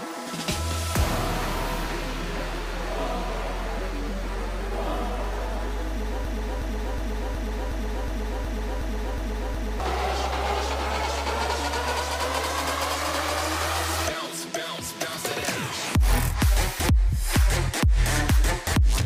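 A stall somewhere in the playback, encoding or streaming chain, most likely a buffer that stopped refilling and kept handing out its last fragment, produces a broken-record loop from 6.25 s to 9.8 s. The same 366 ms slice of audio repeats exactly, back to back, ten times, giving a rigid stuttering rhythm at under three cycles per second. Whatever should have played during those three and a half seconds is gone.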